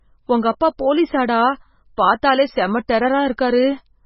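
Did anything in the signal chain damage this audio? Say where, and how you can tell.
Yes, at the codec stage, and it affects the whole speech clip. There is no content above 5.6 kHz, a hard ceiling rather than a natural roll-off, and the sound has a watery, swirling quality with smeared onsets. This is likely MP3 compression at a very low bitrate, around 16 kbps. Starved of bits, the encoder cuts off the treble and drops weaker spectral lines, which then flicker in and out from frame to frame.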